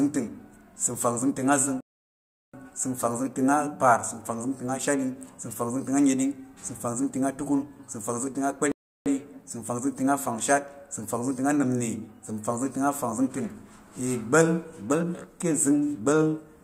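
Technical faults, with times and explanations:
1.81–2.54 s and 8.72–9.06 s, playback stall: the speech cuts off in mid-flow and the output falls silent for 0.73 s and then 0.34 s before sound returns. The likely cause is the player running short of data or its thread being blocked, leaving nothing to output until it recovered. Unlike a brief dropout or click lasting only milliseconds, each gap is a sustained, clean silence long enough to hear as a pause the speaker did not make.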